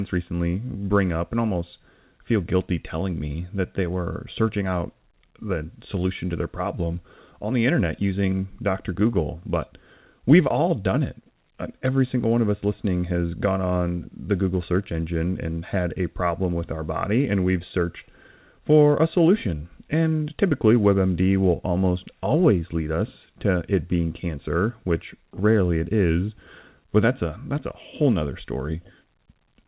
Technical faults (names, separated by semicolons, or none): none